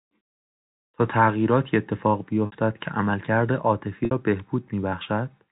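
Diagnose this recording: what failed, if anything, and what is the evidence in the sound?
Network stage: packet loss with pitch repetition at 2.46–2.52 s and 4.05–4.11 s, each gap 60 ms, which fits two lost packets. The receiver repeats the last pitch period, giving a brief buzzy hold. The waveform shows identical cycles under a fading envelope, and the spectrogram shows frozen harmonics.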